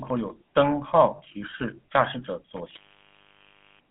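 Throughout, the speech carries the buzzy, gravelly texture of the GSM full-rate codec. This fits the 13 kbps coder, with energy confined to roughly 150 Hz–3.4 kHz, so the spectrogram has a bare band above 3.4 kHz.

From 1.16 to 1.21 s, lost GSM frames make a 40 ms metallic ring. The last good frame is repeated, which shows as smeared harmonics on the spectrogram.

At 2.57 s an intermittent contact opens for about 1.03 s in total. The sound cuts out with an edge crackle, leaving faint hiss and a near-flat waveform while the line is open, in the span up to 3.90 s.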